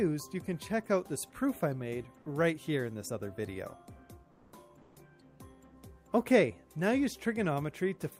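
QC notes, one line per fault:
4.31 to 4.51 s, comfort noise in place of the background: for 200 ms the real background gives way to steady, featureless hiss about 4 dB quieter, likely from discontinuous transmission pausing the stream.
4.81 to 4.95 s, comfort noise in place of the background: for 140 ms the detailed background is again swapped for flat synthetic noise about 4 dB lower, likely a DTX gap filled by the receiver.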